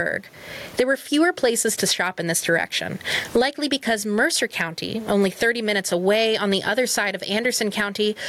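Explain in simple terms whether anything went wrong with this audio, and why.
Throughout, the sound is squashed, with loud and soft parts pulled closer in level: gain pumping, likely a limiter taming far too much microphone gain.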